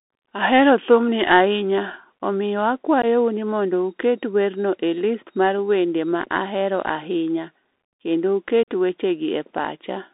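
From the start the speech carries the sound of a Bluetooth CVSD headset codec, with plainly audible damage. The band runs only from about 250 Hz to 3.7 kHz, and the thin, boxed-in tone fits a 64 kbps one-bit delta link whose step size can't keep pace with sharp, loud high content. Sibilants turn scratchy and a fine granular hiss sits under everything. On a spectrogram, energy stops at a hard ceiling near 3.7 kHz, with a grainy noise floor filling the band.

At 3.02 to 3.05 s comes unconcealed Bluetooth headset packet loss: a couple of voice packets, roughly 15 ms of audio, never arrived, and nothing was filled in to cover them. The speech drops out in a brief hole with abrupt edges. At 8.63 to 8.68 s a longer loss of about 45 ms, several packets, leaves a more obvious chop. In the waveform each appears as a sudden flat gap, and on a spectrogram as a thin vertical blank stripe.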